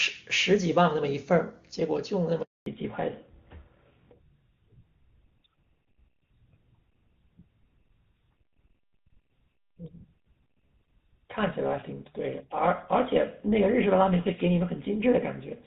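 At 2.42 s there's a handover gap: the call jumps between networks and no speech frames get through, so the sound fades out almost instantly and stays silent for 240 ms, until 2.66 s. Whatever was said in that stretch is simply gone.

Right as the new link comes up at 2.66 s, there's a fallback to narrowband that lasts to the end. Before that, the clean, full-bodied wideband sound fits HD Voice at a high rate like 23.85 kbit/s. Afterwards nothing reaches above 4 kHz, so the speech goes dull and a bit gritty, which fits a drop to an older codec such as GSM full rate.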